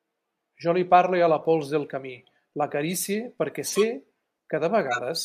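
Right after "a la pols del", at 1.83 s, there's a faint blip from a corrupt frame decoded. Longer, louder chirps follow at 3.67 to 3.83 s and 4.87 to 4.99 s, where damaged frames put energy at the wrong frequencies.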